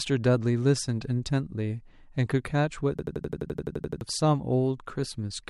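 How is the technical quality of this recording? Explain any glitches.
There's one real glitch in this speech recording, a system hang loop. From 2.99 to 4.01 s the playback froze and the hardware kept replaying the same 85 ms chunk, which fits a 4096-sample buffer. It repeats about 11.7 times a second, giving a machine-gun stutter, and roughly a second of audio is lost.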